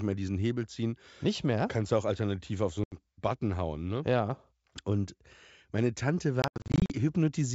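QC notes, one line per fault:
2.84–2.95 s, packet loss on an ADPCM call: about 80 ms of packets drop to hard-edged silence. The decoder's predictor and step size lose track of the sender's, so the returning speech comes back slightly distorted before it settles.
6.42–6.94 s, packet loss on an ADPCM call: a cluster of short gaps, about 280 ms lost across 480 ms, each no longer than 80 ms. Every gap throws off the decoder's adaptation, so the clean G.722 wideband sound around them is broken by repeated hard-edged holes and slightly distorted restarts.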